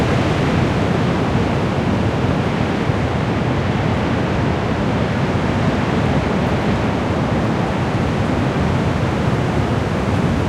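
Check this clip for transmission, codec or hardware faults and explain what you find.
Nothing in this recording of everyday sounds points to a fault. There is no point in the audio that calls for comment.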